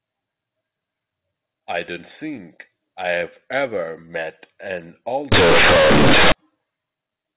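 Right after "I've ever met an", from 5.32 to 6.32 s, the speech turns into a loud, harsh buzz for a full second. That's companded audio read as linear. The mu-law bytes are going out as plain 8-bit samples without being expanded, so every sign flip throws the waveform across about half its range. Quiet and loud parts end up equally huge, and the gaps fill with heavy noise. Around it you can hear the usual telephone bandwidth topping out near 4 kHz, which fits mu-law G.711 telephone coding at 8,000 samples a second.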